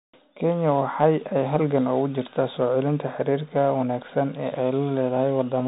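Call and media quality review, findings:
Bluetooth CVSD headset codec throughout: band stops near 3.8 kHz, grainy hiss under speech, scratchy s sounds. Delta-modulation slope overload, not plain telephone band-limiting; fits a 64 kbps link.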